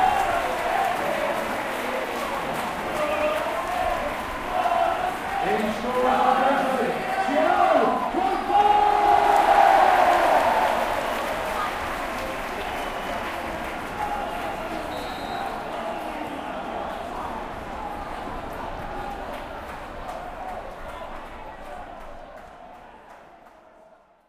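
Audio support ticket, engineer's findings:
Engineer's findings: no fault found in the audio.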